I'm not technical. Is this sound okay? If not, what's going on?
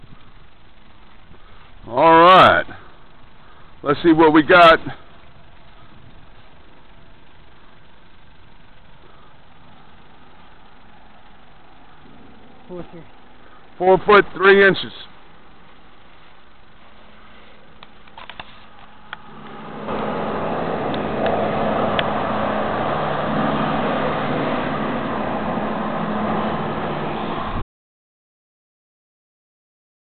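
No. At 27.62 seconds the sound cuts off abruptly and stays dead silent until the end of the clip, about two and a half seconds later. This is an audio dropout to silence: the gap has no background hiss or room sound at all, just silence. The likely cause is that the input was lost, through a device disconnecting, a failed connection or an accidental mute, while the recording kept running. Whatever sound came after that moment was never captured.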